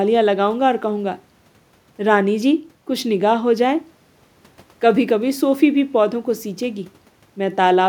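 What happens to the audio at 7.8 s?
Nothing goes wrong at 7.8 s; the speech plays through that moment intact, with no dropout, click or distortion.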